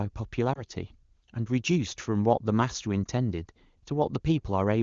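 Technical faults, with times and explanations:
0.53–0.63 s and 3.04–3.06 s, lost AMR speech frames: a single 20 ms block of coded speech failed its check, so the HD Voice decoder filled the gap by repeating its last pitch and vocal tract settings at lower gain, giving a brief dip or warble before the voice returns, weak or rough for a moment.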